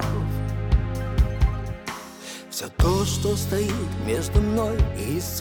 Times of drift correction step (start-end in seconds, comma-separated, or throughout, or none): 3.41-5.27